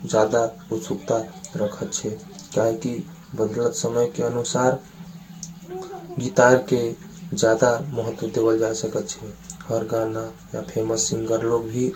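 Throughout, generation loss: likely about seven successive Vorbis re-encodings, which leave the speech swirly, hollow and smeared, with blurred attacks and nothing above 16.6 kHz.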